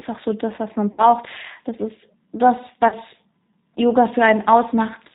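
Throughout, the G.729 codec audibly roughens the speech, consistent with 8 kbit/s coding. A spectrogram shows nothing above 4 kHz and smeared harmonics. From 0.92 to 1.02 s, after "so das was man", and again from 2.88 to 2.95 s, after "ist das", VoIP packet loss concealed by the speech codec stretches the sound into a fading buzzy tone or coloured noise. About 60 ms and 40 ms are missing, fitting three and two lost packets. The waveform shows repetitive, decaying cycles, and the spectrogram shows frozen formants.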